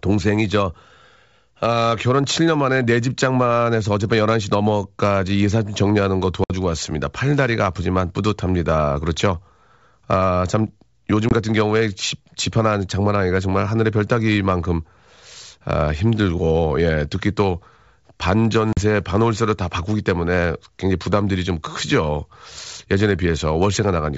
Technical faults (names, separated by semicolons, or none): packet loss on an ADPCM call